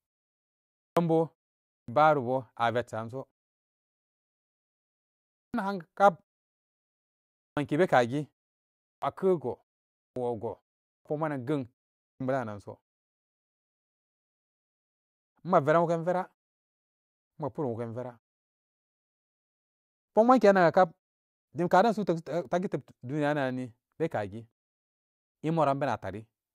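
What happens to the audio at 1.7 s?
At 1.72 s a clipped start after a pause occurs: during the 0.45 s of silence just before, the output device dropped into an idle state, and when speech resumed it needed time to wake and lock again. For 1.72 to 1.88 s nothing reaches the output, so about 162 ms of the onset is swallowed, and the speech bursts in abruptly from silence, missing its opening sounds.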